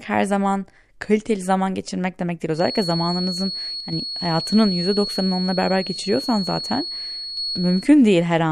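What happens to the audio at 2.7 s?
At 2.7 s a feedback whistle is already running: it starts at 2.51 s, just after "zaman geçirmek demek değil", and holds until 7.92 s. A thin, steady tone near 4.4 kHz sits behind the speech, roughly 10 dB below it, swelling and fading slowly in level. The likely cause is a loudspeaker-to-microphone loop held right at the edge of instability, so that one frequency keeps ringing without building up into runaway howl.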